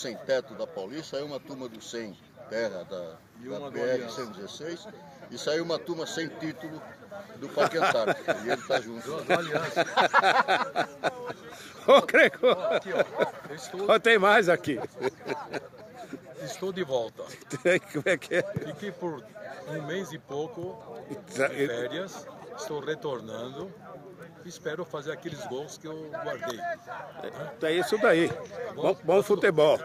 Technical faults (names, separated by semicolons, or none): none